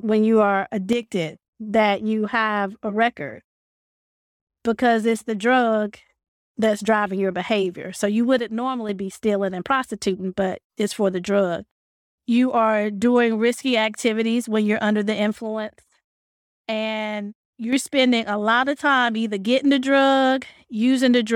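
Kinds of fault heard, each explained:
One channel drops out: The speech level falls abruptly by about 6 dB three times, then recovers. It happens from 0.93 to 1.03 s after "when you are", from 8.39 to 8.89 s before "be stealing and prostituting", and from 15.33 to 17.73 s after "when you're under the". The likely cause is one stereo channel going silent. When the two channels are summed to mono, only half the shared signal remains.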